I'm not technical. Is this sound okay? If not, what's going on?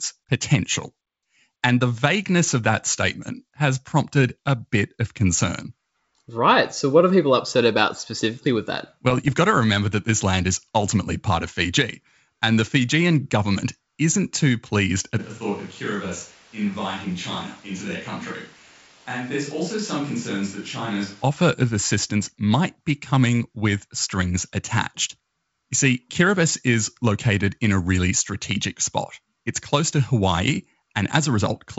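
No. There are two problems.

From 9.07 to 9.33 s, just after "about specifically with that" and before "got to remember that", you hear pops and a short rough, crackly burst with the loudness jumping briefly. These are bit errors on an ADPCM link: a small share of the digital data got corrupted on its way through a phone-style connection. This kind of coding predicts each sample of sound from the last, so one bad bit keeps the decoder off track for a few milliseconds and smears into a burst. That is why it doesn't sound like a dropout: the sound never goes silent. It turns harsh for a moment instead.

From 15.21 to 21.22 s, right after "government isn't too pleased", the sound suddenly turns hollow and roomy, thinner in the low end, noticeably quieter and with more background noise. It snaps back just before "offer of assistance might". This points to a switch to a distant microphone, likely because the close microphone dropped out and a mic further away took over. 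A volume or tone change alone wouldn't add the room echo and noise, and a fade wouldn't flip instantly in both directions like this.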